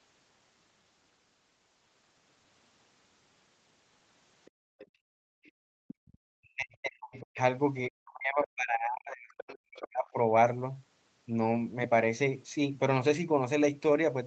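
From 4.45 to 4.87 s a faint second voice sits well below the speech, returning at 5.44 to 5.51 s, 5.88 to 6.17 s, 7.12 to 7.22 s and 9.76 to 9.85 s, quietest in the brief 5.44 s scrap and strongest around 5.88 and 9.76 s. This is the other side's voice leaking through, likely loudspeaker playback the echo canceller failed to remove from the microphone. Overlapping this, from 4.51 to 6.05 s, the room background falls away abruptly, by about 38 dB at its deepest, and recovers after roughly a second and a half. That is background gated by the echo canceller, which clamped the microphone hard while the far end was playing. From 6.33 to 7.38 s and again from 7.88 to 10.16 s, the talker's own speech dips and breaks up, sinking by about 40 dB at worst. This is speech suppressed in double talk, likely the canceller muting both voices because it could not separate its talker from the overlapping echo.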